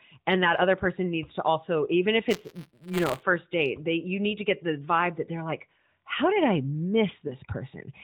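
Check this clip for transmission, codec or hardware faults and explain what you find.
Two faults stand out in this speech, heard through the band-limited sound of AMR narrowband mobile coding.

Buffer tearing runs from 2.30 to 3.23 s, between "to also even if" and "date they you need". The writer and reader of the ring buffer have slipped. A small slice of each period, about 20 ms stale, is replayed with hard joins. This gives a rattling buzz at 172 Hz, which fits a 256-sample buffer.

A lost AMR speech frame occurs at 7.28 to 7.33 s. One 20 ms frame failed its check. The decoder filled the gap by repeating the previous pitch and vocal tract settings at reduced gain. The result is a brief dip or warble before the speech resumes.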